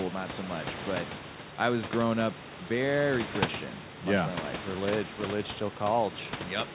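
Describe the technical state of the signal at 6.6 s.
At 6.6 s the speech is intact, with no fault in the signal at that moment.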